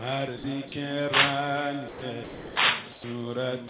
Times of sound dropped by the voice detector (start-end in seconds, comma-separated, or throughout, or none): 0.38-0.72, 1.88-2.56, 2.92-3.04, 3.68